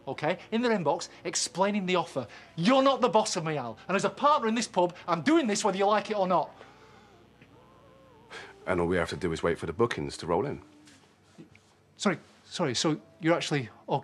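A steady, raspy buzz runs from the start to 8.87 s, well below the main sound: mains buzz, 60 Hz switching spikes leaking in with harmonics reaching several kilohertz.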